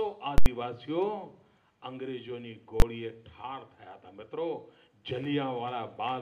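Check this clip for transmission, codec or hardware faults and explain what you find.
Two faults of one kind turn up, both invalid numbers at full scale. From 0.38 to 0.46 s a very loud pop opens and closes an 80 ms gap with no sound between. From 2.80 to 2.82 s a 20 ms block comes through as a single bang. In both, a calculation produced infinite or invalid values, and the output was pinned flat at one extreme value, far beyond the audio's own peaks, for the whole block.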